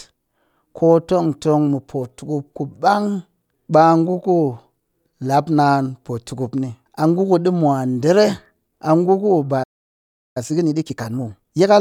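At 9.63 s the speech cuts out mid-flow and stays silent until 10.37 s, a gap of about 0.72 s. This is a playback stall, likely caused by the player's buffer running dry or its output thread being blocked, so nothing reached the output.

From 10.37 s to 11.71 s the speech runs hurried at 1.5 times normal speed while keeping its pitch. This is time-compressed catch-up: the player trims its backlog by removing short segments and cross-fading the joins.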